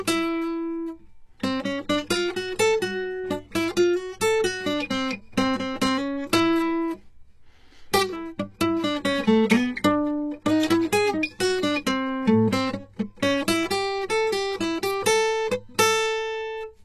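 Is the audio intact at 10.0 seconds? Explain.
No. At 10.0 s, as through the whole music clip, the treble sounds gritty and metallic, with nothing above 12.3 kHz. This is likely HE-AAC compression at a very low bitrate, near 16 kbps. Copied lower bands rebuild the treble, so harmonics misalign.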